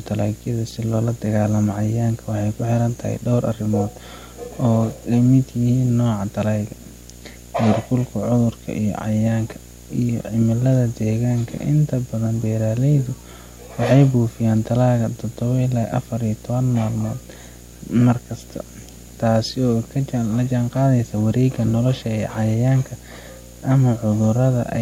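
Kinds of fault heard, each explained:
Video or display buzz: a steady buzz at 60 Hz with a gritty hash riding above it runs under the speech for the whole clip, sitting roughly 25 dB below the voice. It comes from a screen or video cable coupling its picture refresh into the audio path, so the buzz repeats at the 60 Hz field rate and its sharp-edged pulses spray harmonics upward.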